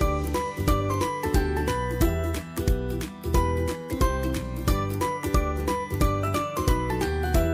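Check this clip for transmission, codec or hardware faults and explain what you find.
Nothing faulty can be heard anywhere in this audio.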